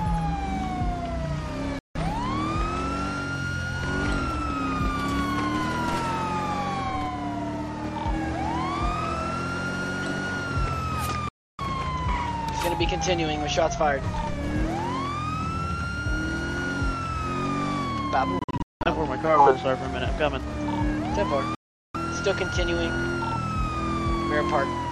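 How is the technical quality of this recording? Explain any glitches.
The recording has four brief gaps where the sound cuts out completely. They sound like a Bluetooth dropout each time. The gaps fall at 1.79 to 1.97 s, 11.29 to 11.61 s, 18.39 to 18.87 s and 21.55 to 21.96 s. The third is broken up, with several short holes spread over about 460 ms, the longest about 190 ms. The edges are abrupt or fade over a few milliseconds. The likely cause is wireless packets arriving too late and being discarded. The sound then resumes further on, as if it had kept playing.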